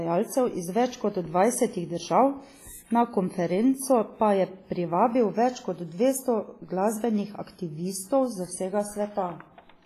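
Throughout, the speech rings and smears, with washy hiss breathing with the signal and nothing above 15.5 kHz: likely heavy, low-bitrate WMA compression.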